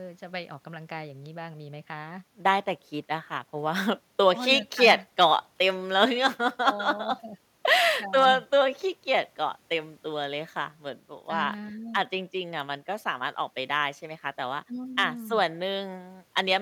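No technical faults can be heard anywhere in the speech recording. There are no events to place on the timeline.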